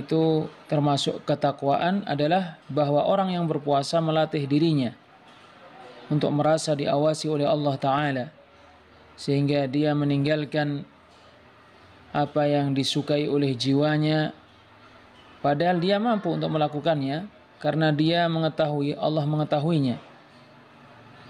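From 0.12 s to 21.24 s the audio carries clock slip clicks: faint, regular ticks about every tenth of a second, clearest on loud sustained or high passages and absent where the sound drops to silence. Each tick is a single sample dropped or repeated. The likely cause is two devices running on unsynchronised clocks that differ by a few hundred ppm.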